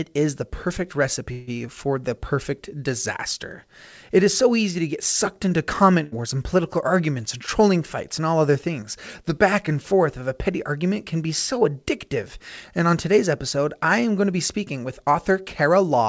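Speech carried over a call path, with nothing above 8 kHz, which fits a wideband codec such as G.722, and several transport faults. At 1.32 s, right after "is the perfect", the sound stalls for about 150 ms. The last sound is held as a fading buzz or hiss, then continues with "for the perfect disaster" and nothing skipped. This is likely a call audio freeze: packets were held up, the jitter buffer ran dry, and the receiver stretched what it had until the late audio arrived. On a spectrogram the harmonics at 1.32 to 1.50 s smear into flat horizontal bands that dim toward the end, and the waveform shows a repeating, shrinking pattern instead of a gap. At 6.03 to 6.15 s a burst of packet loss removes about 80 ms of speech. The receiver fills the hole with roughly 84 ms of the preceding sound, fading out, and the speech resumes further along. The spectrogram shows a short smeared, decaying patch followed by an abrupt jump in content. 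Jitter buffer speed-up shows up twice. After "arguments and trolling fights", from 8.19 to 8.79 s, speech runs about 9% fast. After "episode I am going", from 14.28 to 15.91 s, it runs about 5% fast. In both stretches the buffer had built up excess delay and trimmed it by cutting short pieces of one or a few pitch periods, about a twentieth of a second in the first and a tenth in the second. Pitch is unchanged but delivery sounds hurried. On the spectrogram the harmonic spacing stays constant while syllables are compressed in time, and the waveform shows tiny splices between periods.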